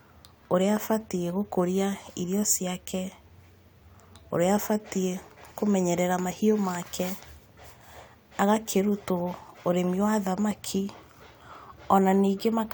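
No technical faults are audible anywhere in the recording.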